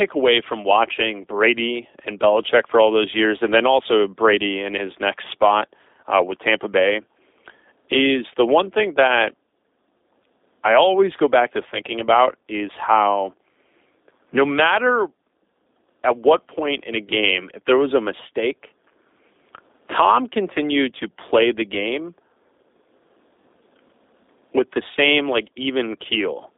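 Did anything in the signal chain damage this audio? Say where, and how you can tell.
Yes. The codec stage is the main culprit: the whole clip has passed through G.729, most likely the G.729A variant, at 8 kbit/s. The speech sits in a telephone band of about 300 Hz to 3.7 kHz with nothing above it, and the codec damage is plainly audible as a rough, slightly synthetic texture. That comes from rebuilding each 10 ms frame from a vocal tract filter, a pitch predictor and a handful of pulses rather than the original waveform.

A network fault sits on top of that: VoIP packet loss concealed by the speech codec, between 20.98 and 21.02 s. About 20 ms of audio is missing, which fits a single lost packet. The decoder filled the gap by extending its last pitch and filter state at falling gain, so the speech is briefly stretched into a fading smear. Because each frame is predicted from the previous one, the sound stays weak or distorted for a moment after real packets resume.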